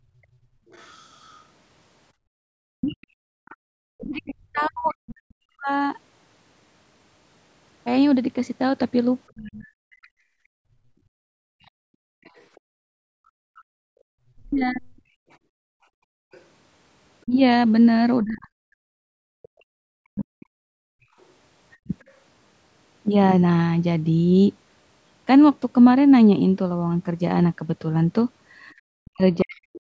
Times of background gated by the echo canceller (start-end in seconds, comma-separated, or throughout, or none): 0.00-3.42, 10.08-16.31, 19.49-21.88